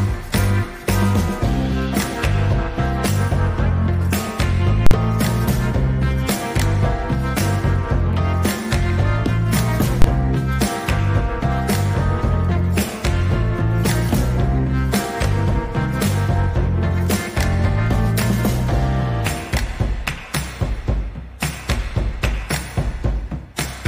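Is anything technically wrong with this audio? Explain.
Yes. There are invalid numbers at full scale at 4.87 to 4.91 s and 10.02 to 10.04 s. A calculation produced infinite or invalid values, and these were pinned to the maximum level. The output sits flat at one extreme value, beyond the audio's peaks, for 46 ms, then 23 ms. That fits 2048- and 1024-sample blocks. Each is heard as a very loud pop.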